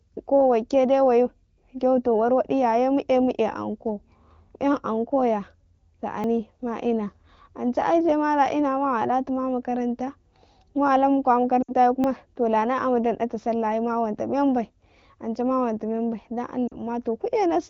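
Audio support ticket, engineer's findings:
Dropped buffer (overrun): jumps at 6.24 s and 12.04 s, the sound jumping ahead by roughly 30 ms and 10 ms with no gap. Likely capture overrun overwriting unread samples, unlike frame loss, which smears.

Lost AMR speech frames: dropouts to near silence within two frames, 11.62–11.74 s (60 ms) and 16.67–16.76 s (40 ms). The AMR-WB decoder concealed them by repeating the last pitch and vocal tract settings with falling gain. These fade out rather than click.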